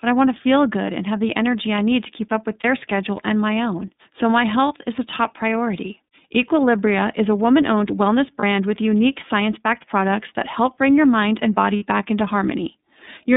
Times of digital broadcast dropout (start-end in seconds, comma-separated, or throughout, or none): none